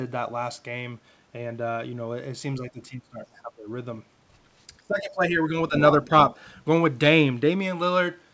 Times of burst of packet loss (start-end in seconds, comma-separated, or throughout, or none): none